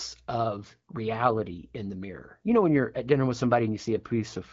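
Nothing stood out on listening to this speech clip; it carries the narrowed, lightly coded character of AMR-WB wideband (HD Voice) at about 12.65 kbit/s, with no fault heard.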